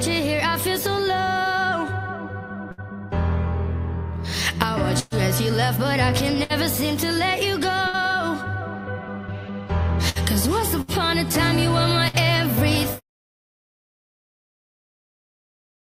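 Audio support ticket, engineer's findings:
Burst of packet loss: packets lost or late at 2.71, 5.0, 6.43, 7.87, 10.09, 10.81, 12.08 s. Receiver extends last sound, fading, then skips ahead. About 60 ms of audio missing each, 120 ms at 5.0 s.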